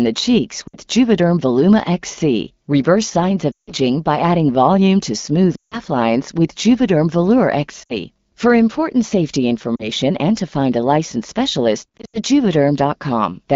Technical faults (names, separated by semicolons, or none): lost AMR speech frames